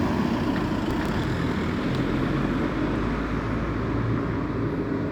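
From 0.91 to 1.24 s, processor overload crackle: the processor missed a handful of tiny buffer deadlines, each repeating stale audio, leaving a gritty, tearing crackle over the sound.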